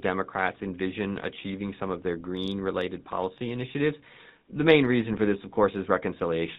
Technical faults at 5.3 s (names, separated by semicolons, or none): GSM full-rate codec